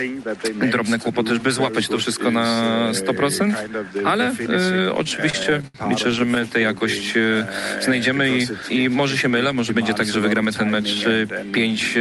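From 4.97 to 6.41 s there are repeated stalls (stutter): packets kept arriving late, the jitter buffer ran dry fifteen times, and the receiver stretched the last sound to cover about 245 ms, the longest hole 74 ms. Nothing's lost, but it drags and hiccups.

Then at 7.17 to 7.37 s you get a jitter buffer slow-down. The receiver was rebuilding its reserve by repeating tiny pitch-period chunks, adding 36 ms and running that stretch at 86% speed, so the sound draws out without shifting pitch.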